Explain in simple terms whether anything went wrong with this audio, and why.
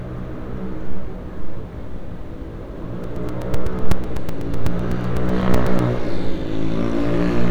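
From 3.04 s to 5.80 s there are periodic USB or driver dropouts: about twenty short ticks, spaced every 0.125 s. Each time, something briefly stalled the audio connection, and a few milliseconds of sound were replaced by silence.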